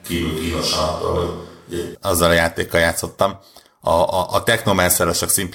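Speech, with a switch to a distant microphone running from the first moment until 1.95 s. Over that stretch the sound is roomy and hollow, thin in the low end, with room noise sitting about 35 dB below the speech, while the overall level barely changes. At 1.95 s it snaps back to a close, full tone. The likely cause is that the close microphone was missing for that part, leaving a pickup farther from the talker.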